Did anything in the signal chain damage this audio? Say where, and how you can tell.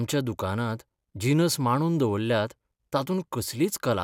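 No, nothing in the signal chain audibly damaged this speech.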